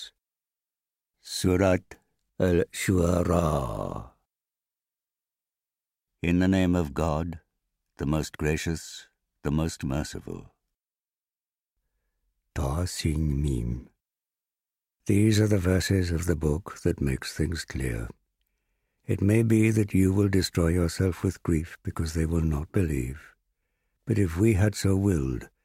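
No technical faults are audible.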